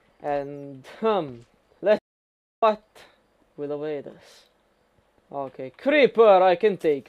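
The audio has a playback stall: at 1.99 s the sound cuts out mid-flow and stays silent for about 0.64 s, resuming at 2.63 s. The likely cause is the player running out of buffered data or its output thread being blocked until it recovered.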